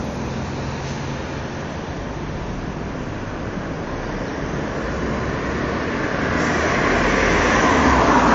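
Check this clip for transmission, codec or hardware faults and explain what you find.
One fault runs through the whole clip: MP3 compression damage, plainly audible from start to end. The swirling texture points to a low bitrate, around 48 kbps, as the likely cause. Starved of bits, the encoder discards weaker frequency detail. That detail flickers in and out between frames. The sound turns watery and smeared.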